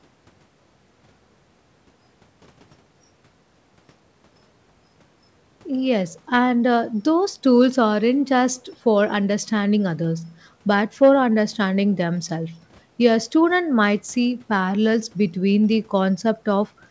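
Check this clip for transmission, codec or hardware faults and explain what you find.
No faults turned up in this clip.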